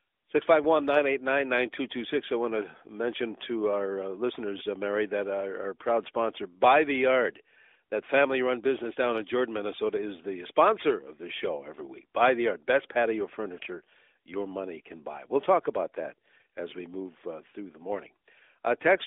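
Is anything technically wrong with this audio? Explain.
No, there is nothing technically wrong: the speech comes through a narrowband mobile link whose band runs from about 300 Hz to 3.6 kHz, with light codec coloration that fits AMR narrowband at its 12.2 kbps mode, and that band limit is simply how the channel works.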